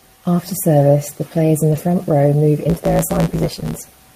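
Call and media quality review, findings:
Lost packet rebuilt from error correction, 1.71–1.77 s: two separate packets missing, about 40 ms replaced by the low-bitrate redundant copies carried in the following packets. No gap, but the speech turns briefly rough and noisy. Probable component: network path, Opus in-band FEC recovering at decoder.

Block size mismatch (truncated), 2.69 s to end: 109 Hz buzz at the block rate, speech running 1.16 times fast. Upstream stage writes longer blocks than downstream reads, which fits a 512-sample write. Each block's tail is discarded. Probable component: buffer handoff between processing stages.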